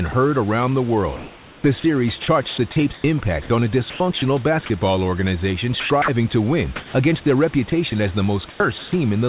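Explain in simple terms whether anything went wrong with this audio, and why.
Several short gaps appear where the speech is briefly replaced by a smooth, artificial hiss. This comes from the call's voice detector, which stops sending audio when it decides nobody is talking, while the receiving end fills the hole with made-up noise.

The first is sound dropped by the voice detector, from 0.12 to 0.14 s, just before "around the". A tiny slice of sound disappears once into steady noise and the speech returns cleanly, likely because the detector mistook a bit of quiet sound for background. It is a single clean gap, not a repeated stutter.

More serious is sound chopped by the voice detector, where the detector likely flipped on and off several times in one stretch. The speech becomes choppy, with syllables and word edges swapped for hiss. This happens from 1.16 to 4.22 s, where roughly a second in total is lost, then from 5.80 to 6.08 s between "basketball organization" and "to win against their", from 7.70 to 7.92 s, and from 8.50 to 8.92 s after "as the". 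The repeated switching within each stretch is what sets it apart from a single drop.

Finally, comfort noise in place of the background fills a pause from 6.76 to 6.94 s, likely because the detector stopped sending during a natural silence. No speech is lost. Only the room's real background sound is swapped for a featureless, almost equally loud noise. All of this rides on a phone-quality line with nothing above 4 kHz.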